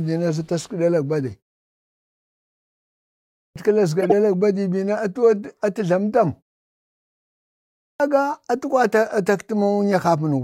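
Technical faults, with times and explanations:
3.33 to 3.56 s and 7.77 to 8.00 s, clipped start after a pause: speech bursts in abruptly with its opening sounds missing, about 0.23 s lost each time. After pauses of 2.0 s and 1.4 s, the output device went idle and took that long to wake before playing.
4.01 to 4.13 s, corrupt frame decoded: a loud, harsh blip of noise, peaking around -5 dBFS, cuts across the speech for about 0.12 s. A few consecutive compressed frames carried damaged bits, and the decoder played them, scattering energy into the wrong frequencies.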